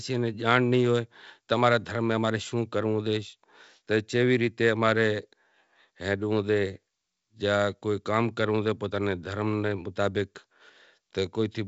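Nothing goes wrong anywhere in this speech, which comes through G.722 wideband telephone coding with its top end stopping at around 7.7 kHz, just as that coding path should.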